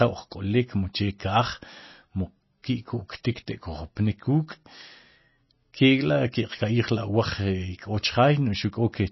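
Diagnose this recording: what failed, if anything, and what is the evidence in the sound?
The codec stage is at fault: throughout the speech nothing sounds above 5.8 kHz, and plainly audible watery, swirling artefacts come and go. That likely points to MP3 compression at a low bitrate, about 24 kbps, cutting treble and zeroing weak bands frame by frame. A plain low-pass filter would remove treble without the shifting swirl.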